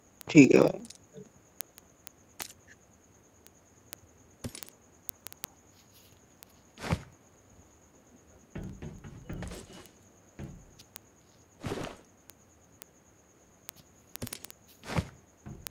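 From 0.15 s to 15.67 s, word clock ticks repeat about every 50 ms. The receiving clock is unlocked, roughly 400 ppm off, and slips one sample per tick.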